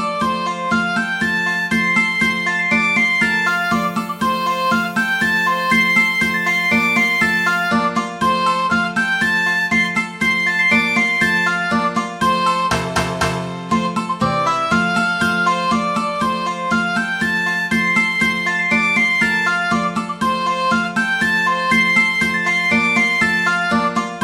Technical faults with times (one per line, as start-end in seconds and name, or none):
3.47-7.69 low bit depth with noise shaping